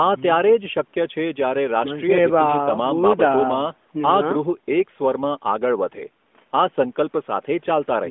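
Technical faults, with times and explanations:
No technical faults are present in this speech; the signal carries the narrow telephone band of an AMR-NB mobile call, roughly 200 Hz to 3.5 kHz, with the light coding texture that fits its highest 12.2 kbps mode, after call microphone processing that has taken out only the lowest bass.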